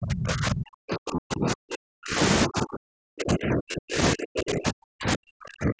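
From 0 to 2.19 s the speech is pushed down hard, by as much as about 40 dB, dipping and dropping out in pieces. This is speech suppressed in double talk, most likely an echo canceller mistaking near-end speech for loudspeaker echo while both sides talked. Within that stretch, from 1.16 to 1.18 s, about 22.5 ms of audio is missing and patched over, which fits roughly three lost frames. This is concealed Bluetooth headset packet loss: the receiver extends the previous waveform, so a brief buzzy, held tone replaces the gap and a slight warble follows as real audio returns. The same suppression resumes from 2.47 s to the end at 5.79 s, again reaching about 40 dB of attenuation with broken-up, choppy speech. A second concealed loss of the same 22.5 ms length falls at 3.72 to 3.74 s, with the same short tonal fill over the wideband headset audio, which tops out at 8 kHz.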